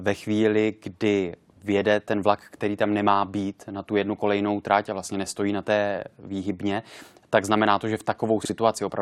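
Frames out of order at 8.42 to 8.50 s: two neighbouring runs of two blocks each, about 43 ms per block, were decoded in swapped sequence, so this brief stretch of speech plays with its halves exchanged. It comes across as a garbled flutter, and no time is lost.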